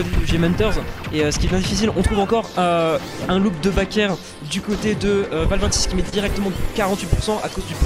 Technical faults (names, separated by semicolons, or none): short concealed packet loss